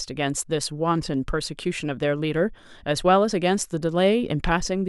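No technical faults can be heard anywhere in the speech recording. There is nothing in it that calls for a time mark or a description.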